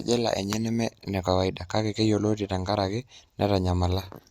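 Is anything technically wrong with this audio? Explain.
No, nothing technically wrong can be heard in this speech recording. No fault turns up anywhere in it.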